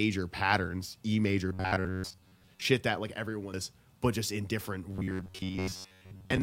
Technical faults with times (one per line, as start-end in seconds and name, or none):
1.49-2.65 robotic sound from repeated short buffers
3.54 damaged data in a compressed stream
4.93-6.42 robotic sound from repeated short buffers